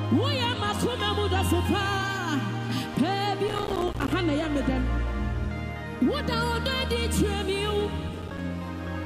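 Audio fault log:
3.48–4.13 s: processor overload crackle, a run of dropped buffers of about 5 ms each, each leaving a hard-edged silent gap, heard together as gritty tearing.
8.22–8.39 s: processor overload crackle, a brief repeat with only a handful of missed buffers, so the silent gaps give a short crackling burst.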